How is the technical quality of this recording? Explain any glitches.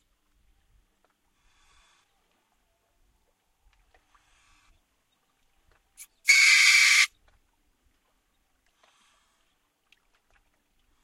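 No technical faults are audible.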